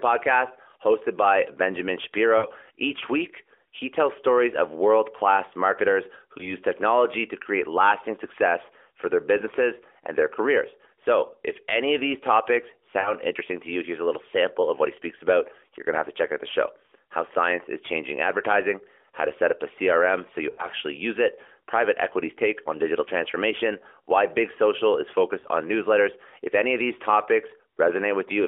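Lost AMR speech frames occur at 2.38–2.47, 6.38–6.55, 13.00–13.13, 20.50–20.68 and 25.40–25.47 s. The decoder repeats the last good frame with falling gain, so speech smears and dips. The longest gap, at 20.50 s, fits four lost frames, while the one at 6.38 s fits one.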